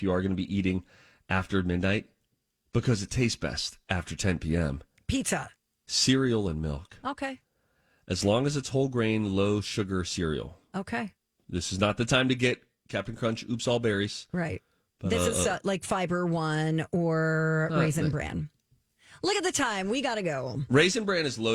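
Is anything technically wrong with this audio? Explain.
No, nothing is technically wrong with this audio.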